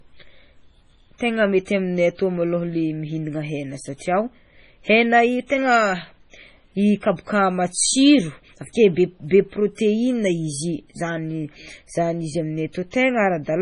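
A speech recording, heavily damaged throughout by what is likely MP3 compression. Nothing survives above 10.5 kHz. The sound is watery and swirly, which fits a bitrate around 24 kbps. Pre-echo appears just after "kabaka matsiro", from 8.73 to 8.75 s. A short hiss leads the next attack by 23 ms and softens it.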